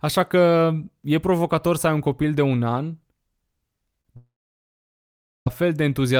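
At 4.01 to 4.07 s there is a short concealed packet loss. About 20 ms of the call arrived too late for the decoder, and the receiver covered the gap with roughly 27 ms of synthesised continuation before blending back into the real signal. It is heard as a brief smear or wobble rather than a gap. The audio keeps flowing, and that separates it from the far longer break that follows.

From 4.17 s the sound is carried on as a decaying buzz or hiss, then gives way to about 1.18 s of silence. The audio resumes at 5.48 s, and what should have filled that stretch never comes. This is likely a long network dropout, with nothing received for about 1.3 s. Unlike the earlier loss, concealment cannot bridge a gap of this length, so what you hear is an audible hole rather than a smear.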